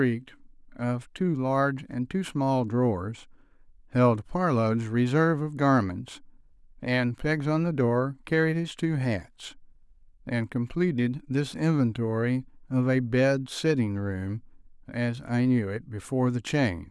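Nothing in this recording comes across as a technical fault, so there's no moment along the way worth flagging.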